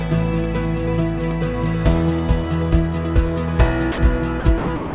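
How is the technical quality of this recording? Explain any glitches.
The recording has four brief dropouts near the end, at 3.92–3.98 s, 4.40–4.44 s, 4.58–4.68 s and 4.76–4.94 s, heard over a band limited to about 4 kHz. Each gap lasts 40 to 180 ms and is filled with steady hiss. This is likely sound dropped by the voice detector: transmission paused and comfort noise was substituted. The fill is smooth noise rather than clicks or repeated fragments, which separates it from packet loss.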